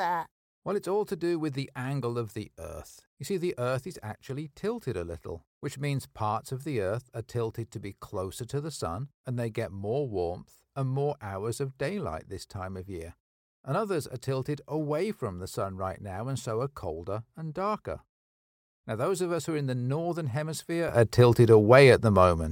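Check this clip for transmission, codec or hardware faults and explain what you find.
One fault stands out near the end. At 20.89 s a sudden gain jump lifts the speech and its background noise together by about 12 dB until the clip ends, likely from a digital gain setting applied instantly without a ramp. The waveform envelope steps up abruptly, and the spectrogram brightens uniformly across all frequencies.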